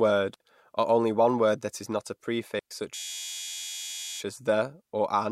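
At 0.34 s, just before "or only one word", and at 2.59 s after "that is not a", digital wireless dropouts mute the link for 60 ms and 116 ms: clean near-silent holes with no surrounding noise burst, unlike analogue interference. From 2.95 to 4.20 s a system hang loop repeats one 11.6 ms chunk, which fits a 512-sample buffer, as a steady 86 Hz buzz rather than silence. Speech then resumes with "as the or an", apparently with nothing skipped.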